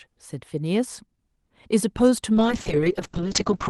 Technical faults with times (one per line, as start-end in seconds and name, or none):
2.35-3.70 call bitrate drop